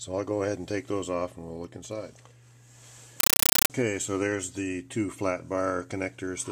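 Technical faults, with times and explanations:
3.2–3.7 s, compressed stream played as audio: harsh, loud chattering static of 8 ms noise bursts 31 times a second, which fits an undecoded AC-3 stream taken as samples.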